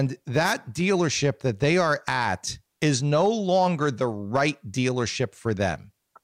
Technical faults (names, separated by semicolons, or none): wireless microphone noise hit